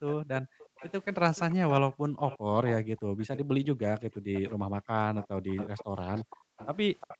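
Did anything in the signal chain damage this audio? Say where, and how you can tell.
Yes. In the call processing, the echo canceller gated the background: while far-end audio played, it pulled the microphone down by about 40 dB. The room tone drops out from 0.0 to 0.69 s (under half a second in all) and in patches between 1.89 and 6.57 s (around two seconds in all).

A repeat of the speech trails the original by 355 ms from 0.07 to 3.38 s, 4.13 to 4.51 s, and 5.16 s to the end. It sits roughly 10 to 20 dB below the direct speech. The likely cause is an echo leak, where the far end's canceller let loudspeaker pickup return.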